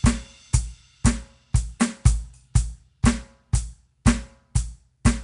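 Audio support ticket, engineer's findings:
Music, throughout: plainly audible rough, hissy halo and smeared, underwater tone, nothing above 10.6 kHz. Likely Nellymoser compression (Asao codec): 256-sample blocks, weak bands noise-filled; fits about 44 kbps. Spectrogram: hard 10.6 kHz ceiling, grainy noise between partials.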